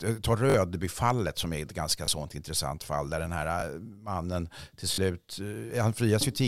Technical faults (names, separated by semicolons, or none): repeated buffer